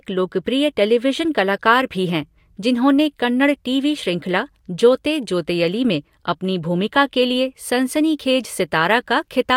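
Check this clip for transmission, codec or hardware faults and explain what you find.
I find no faults in this clip.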